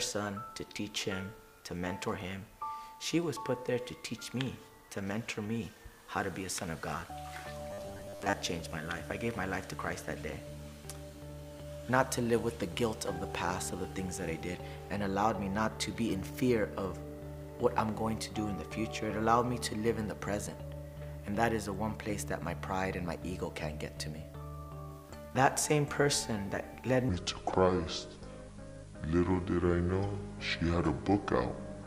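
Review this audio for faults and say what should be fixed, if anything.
Audio likely arrived too seldom between 7.71 and 8.33 s, so about half the stretch is a looped 10 ms buffer, giving robotic sound from repeated short buffers: a rigid metallic buzz at 100 Hz. Keeping input buffers from running dry would prevent it.

From 27.09 s to the end, a section at the wrong speed plays at 0.693 times normal, likely from a clock mismatch, so it sounds slow and roughly seven semitones deeper. Matching the playback rate to the recording clock would prevent it.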